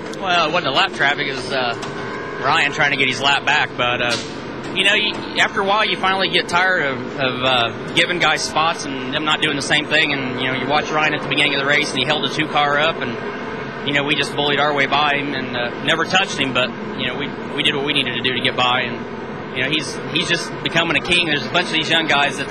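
No technical faults are audible.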